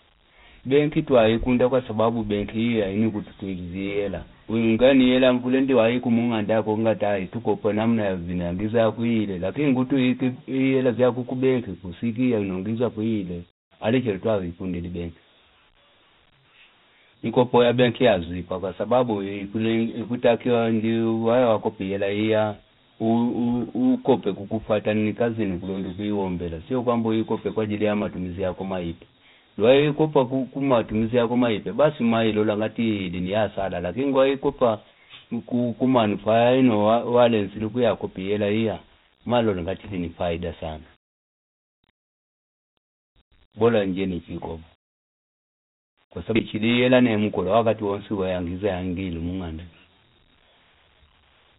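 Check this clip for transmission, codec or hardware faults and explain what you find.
One codec fault runs the whole length of the speech: Dialogic VOX ADPCM. The audio was squeezed into 4-bit adaptive differential samples, consistent with about 32 kbps at 8,000 samples a second, so nothing survives above 3.8 kHz. The band sounds dull, and a plainly audible gritty hiss rides on every syllable.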